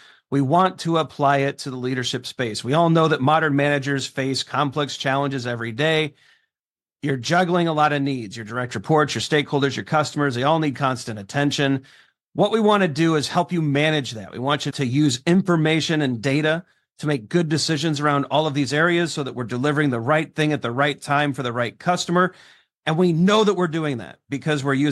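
A speech recording with a resampler restarted on every block: converting 44.1 kHz to 48 kHz in isolated 50 ms chunks leaves an error at each seam, heard as a steady 20 Hz tick-buzz throughout. Unlike mains hum, it disappears in pauses because it only rides on signal.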